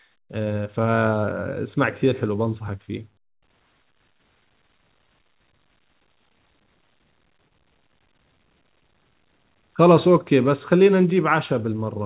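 At 7.48 to 7.52 s, a short concealed packet loss occurs: about 20 ms of the call audio failed to reach the decoder in time, and the receiver patched the gap by extending the preceding sound for roughly 24 ms before crossfading back into the real signal. The result is a brief smeared wobble in the speech. The call path's narrow band, with nothing above 4 kHz, fits a G.711 A-law stream.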